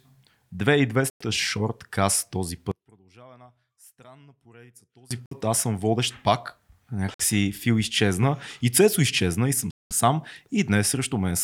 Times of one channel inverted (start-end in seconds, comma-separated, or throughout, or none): 2.71-5.11